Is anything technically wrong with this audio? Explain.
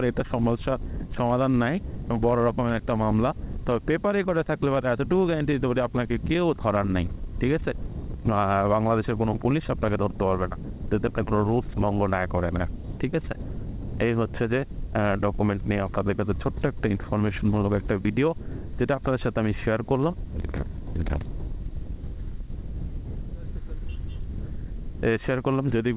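No, nothing is technically wrong with this audio; it comes through a G.711 A-law call path, which is why nothing is heard above 4 kHz.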